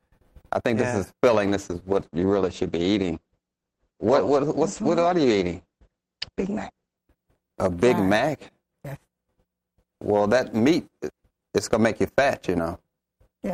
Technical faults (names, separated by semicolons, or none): call bitrate drop